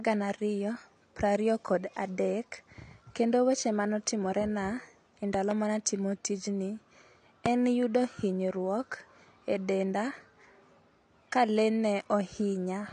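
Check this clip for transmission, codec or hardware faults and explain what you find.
Two kinds of fault are present: lossy compression across the whole speech clip, and loud pops at two points.

AAC compression runs throughout. The speech sounds dull and smeared, with a fizzy warble on sibilants, likely from AAC-LC at a low bitrate, around 32 kbps. The encoder discards content above 9.8 kHz and coarsely quantises what remains. A spectrogram shows a hard ceiling at 9.8 kHz.

Loud pops occur at 5.34 to 5.54 s, between "mane otimore na e" and "mane atimo tijni", where two pops land about 10 dB above the speech. A single, louder pop about 20 dB above it hits at 7.46 to 7.48 s, just before "en yudo hinyruok". The likely cause is a sudden voltage step or spike added to the signal, such as a switch or connector glitch. The waveform shows tall narrow spikes, and the spectrogram shows vertical broadband lines.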